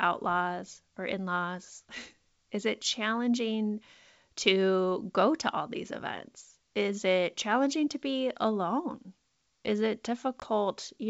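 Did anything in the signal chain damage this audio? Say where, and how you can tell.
Yes: packet loss on the ADPCM call, a network-stage fault. At 10.40 to 10.46 s a hard-edged 20 ms hole, likely one packet, is followed by slightly distorted speech as the decoder's predictor resynchronises. That recovery is what distinguishes it from a plain dropout.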